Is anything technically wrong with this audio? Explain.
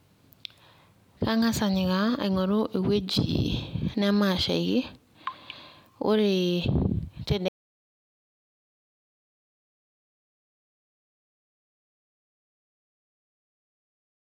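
Yes. At 7.48 s the speech cuts off abruptly and never returns, an audio dropout to silence that runs to the end. The input was likely lost while the recorder kept writing zeros. The waveform becomes a flat line, and the spectrogram goes blank with no room tone.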